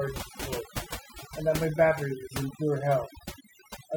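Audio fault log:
Throughout, overdone noise removal: aggressive noise reduction gates bands near its noise estimate, leaving twinkling specks in near-silence.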